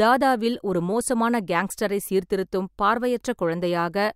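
No technical faults can be heard anywhere in the recording: the signal stays continuous and steady throughout, with nothing breaking into the speech or altering its level or timing.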